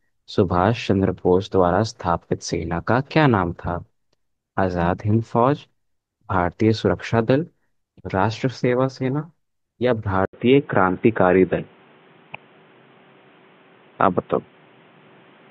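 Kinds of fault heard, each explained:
Input switched to a poorer device: at 10.25 s an 80 ms gap, then the speech runs to the end with nothing above 3.8 kHz, sounding dull and boxy over a faint new noise floor at much the same level, likely from a changed microphone or headset profile.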